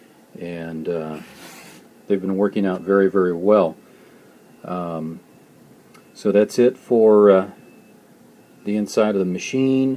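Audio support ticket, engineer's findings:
Listened through in full; nothing stood out, and there is no finding to log.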